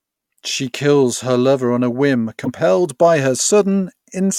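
At 2.42 to 2.48 s, right after "lover on a whim" and just before "by her", the speech is interrupted by a brief glitch lasting about 60 ms. This is damaged data in a compressed stream: a stretch of the encoded bytes arrived corrupted, so the decoder misread those frames, lost its place in the bitstream and had to hunt for the next valid frame header before the speech could resume.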